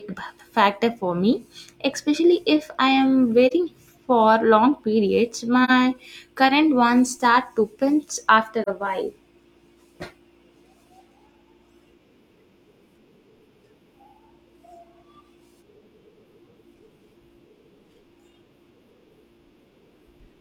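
An AAC decoder lost single frames and muted them by zeroing their spectrum. The overlapping windows turn each loss into a soft fade out and back in. The speech dips briefly after "especially if I am" at 3.47 to 3.53 s, again at 5.64 to 5.70 s, and after "ones start to pinch" at 8.63 to 8.68 s, just before "a while". Each dip fits one lost frame of about 43 ms.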